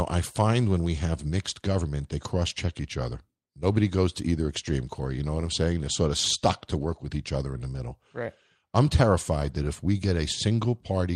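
At 4.67 to 4.69 s, again at 6.81 s, and once more from 9.39 to 9.53 s, you get a lost packet rebuilt from error correction. The missing audio was filled in from the low-bitrate backup copy carried in the following packet, so nothing drops out. Those stretches just turn briefly rougher and noisier. The first two are each about 20 ms, which fits a single lost frame. The last runs about 80 ms, pointing to a short burst of several packets.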